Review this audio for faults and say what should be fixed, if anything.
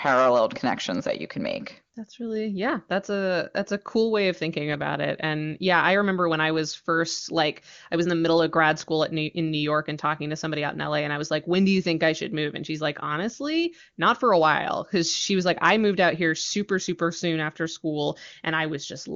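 No faults found here; nothing needs fixing.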